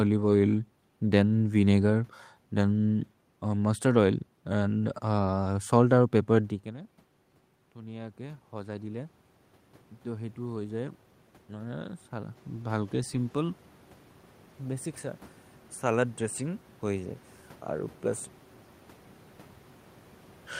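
Speech, with automatic gain rising twice. From 7.75 to 9.08 s, then from 10.04 to 13.62 s, voice and room noise swell together. The input fell by about 18 dB after the talker moved, near 6.5 s. The gain control compensated by about 4 dB, then about 6 dB.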